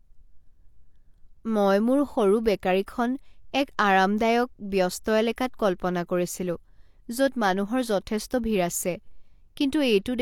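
A transform codec spread quantisation noise across blocks holding late attacks, producing pre-echo at 2.86 s, after "মই মোৰ সৰু", and 5.36 s, before "কল্পনা কৰিছিলো": brief hiss, roughly 17 ms, smearing each onset.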